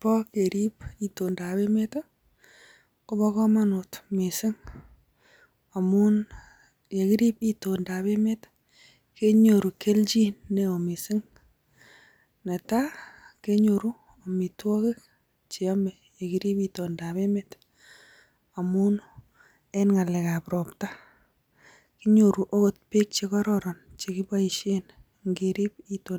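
No technical faults can be heard anywhere in the recording.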